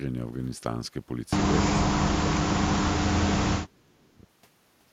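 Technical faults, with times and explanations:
1.94–4.26 s, speech suppressed in double talk: speech sinks by up to about 30 dB, likely an echo canceller ducking during overlapping talk; the waveform narrows and spectrogram energy fades.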